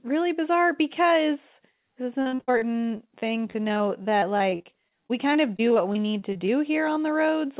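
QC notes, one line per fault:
2.22–6.50 s, repeated packet loss (robotic sound): right after "because this is an", the audio starts dropping out again and again, about three dozen small holes across the stretch, the longest around 70 ms. Each hole gets patched by stretching the last bit of sound, so roughly a fifth of the span is filler. That constant patch-then-skip gives the choppy, robotic texture, with bits missing. The narrowband call path underneath stops at 4 kHz, which fits a G.711-style codec.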